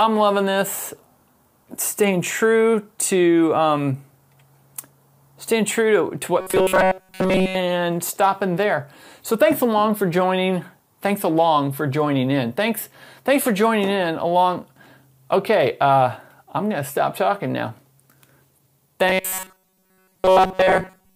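From 6.40 to 7.56 s, and again from 19.08 s to the end, the audio turns into robotic sound from repeated short buffers. A rigid, metallic buzz sits at 188 Hz. That fits a loop of about 5.3 ms. Most of the real audio is likely skipped while the last buffer repeats.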